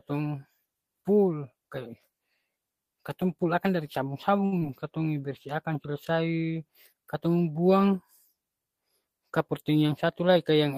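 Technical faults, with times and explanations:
4.45 to 4.54 s, short stall from a late packet: just after "pul akang dari" a packet turned up late and the jitter buffer ran dry, so the receiver held the last sound for about 66 ms until the packet arrived and then resumed from the same point. Nothing is lost, but the sound is drawn out slightly too long with a faint buzz or dip, and the playout delay grows by those 66 ms.
4.60 s, short concealed packet loss: about 20 ms of audio never reached the decoder in time. The receiver patched the gap by extending what came before, roughly 11 ms of synthesized fill, then blended into the real signal again. The result is a brief smear or wobble right after the stall, and a short consonant at that point can be swallowed because its actual content was replaced by extrapolation.
9.48 to 10.37 s, jitter buffer speed-up: the buffer was holding more audio than its target, so the receiver trimmed short pitch-period-length pieces repeatedly to bring the delay back down. 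Across this stretch playback runs at about 108% speed with pitch unchanged, removing roughly 70 ms in total. The speech sounds slightly rushed and clipped in rhythm, since syllables are shortened rather than raised in pitch.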